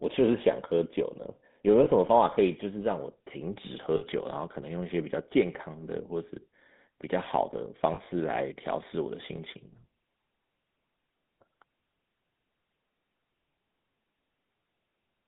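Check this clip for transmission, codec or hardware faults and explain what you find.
Two faults are present: the whole recording has passed through a GSM full-rate codec, and there are three brief dropouts from lost GSM frames.

GSM full-rate codec, throughout: The speech is modelled as a vocal-tract filter excited by sparse regular pulses, which fits 13 kbps full-rate coding. This produces a plainly audible buzzy, gravelly roughness. A spectrogram shows the energy confined to about 150 Hz to 3.7 kHz, with smeared, grainy harmonics.

Lost GSM frames, at 1.84–1.88 s, 3.96–4.04 s and 7.94–7.99 s: Each missing stretch was filled by repeating the previous good frame's parameters. This is heard as a short metallic ring. The lengths point to one, three and two lost 20 ms frames. The waveform shows a repetitive patch, and the spectrogram shows frozen horizontal streaks.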